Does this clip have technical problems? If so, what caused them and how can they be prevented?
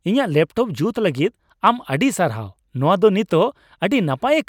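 No, nothing technical goes wrong anywhere in this speech, so there's nothing here that needs fixing or preventing.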